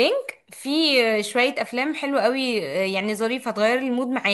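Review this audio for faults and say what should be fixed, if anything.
No faults heard; nothing to fix.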